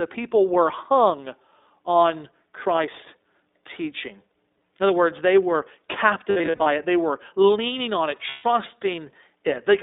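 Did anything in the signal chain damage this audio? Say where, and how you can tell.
Yes. Throughout the recording the speech sounds boxed-in and slightly rough, with a synthetic edge on vowels and consonants. The band runs only from about 250 Hz up to 3.7 kHz, and the coding damage is plainly audible. This is the iLBC codec, a narrowband VoIP coder at the codec stage. It encodes each frame's excitation on its own, and the grain fits its 15.2 kbps mode with 20 ms frames.

At the network stage there are lost iLBC frames. Between 6.30 and 6.67 s the speech breaks into short held, buzzy vowel-like fills scattered over about 360 ms. Together they add up to roughly 220 ms, and the longest gap is around 70 ms. About 140 ms of lost frames between 8.30 and 8.46 s sounds the same. In each case the decoder repeats the last pitch cycle blended with noise, and the voice is back almost at once afterwards.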